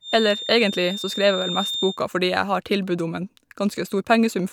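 From the start to 2.0 s, a thin feedback whistle at one pitch, 3.6 kHz, sits behind the speech, somewhat below it in level, and swells and fades slowly. The likely cause is a loudspeaker-to-microphone loop held just at the edge of feedback. One frequency rings on without building up.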